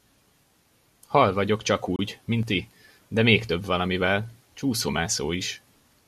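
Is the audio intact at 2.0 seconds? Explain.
No. A gap between stream segments cuts the speech from 1.96 to 1.99 s, just before 2.0 s. The timestamps of adjacent segments leave a hole of about 28 ms, which the player fills with hard-edged silence. No audio is lost; playback resumes immediately.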